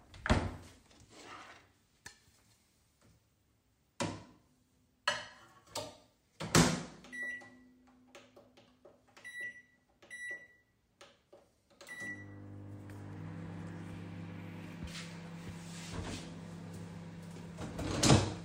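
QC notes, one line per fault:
No faults to note.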